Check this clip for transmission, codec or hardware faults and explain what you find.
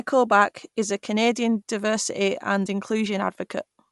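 One fault is present across the whole clip. Bluetooth LC3 compression, throughout: the speech has likely passed through LC3, the transform codec of Bluetooth LE Audio, which cuts everything above 11.5 kHz and fills thinned upper bands with noise. The result is a plainly audible breathy, grainy edge, consistent with 48 kbps and 10 ms frames.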